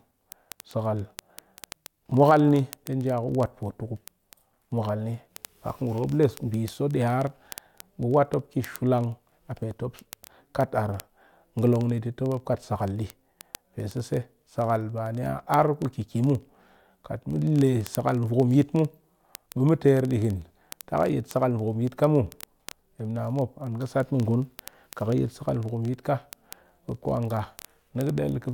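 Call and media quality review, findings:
Word clock ticks, 0.13 s to 28.52 s, continuous through the speech. Sharp ticks of uneven strength at a steady rate of about one every 30 ms, roughly a thousand in all. Probable component: digital input receiver running on its own clock, not slaved to the sender's. The two clocks drift apart by around 700 ppm, so they slip past each other constantly, and a single sample is dropped or repeated at each slip.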